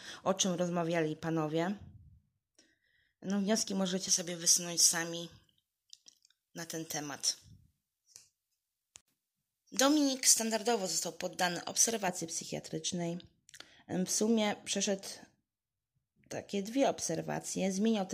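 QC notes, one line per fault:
4.08–12.08 s, pre-emphasis left on: the speech turns thin, bright and sibilant, with treble lifted by about 11 dB at 10 kHz relative to 1 kHz. The transmission boost was never cancelled by the matching de-emphasis, and the shape of the lift fits a J.17 curve.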